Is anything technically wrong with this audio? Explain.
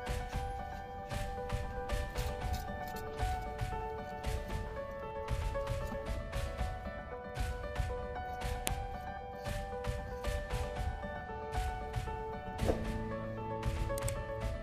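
Yes. At 8.67 s there is a single sharp, loud click: a file header played as audio. When separate WAV pieces are joined or streamed without stripping their headers, those few dozen bytes of metadata get read as samples and burst out as a snap. Unlike a splice discontinuity or a dropout, it is not tied to the waveform around it. It lands at the start of a new piece and sounds the same whatever the signal is doing.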